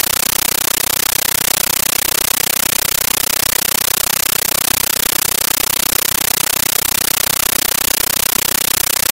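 Throughout, the audio is replaced by loud, chattering static: a compressed stream played as audio. Bursts of noise about 13.3 ms long repeat 31.25 times a second with silence between, the AC-3 frame rhythm of an undecoded Dolby Digital stream, which fits 640 kbps. That strict periodic gating separates it from steady digital noise or clipping.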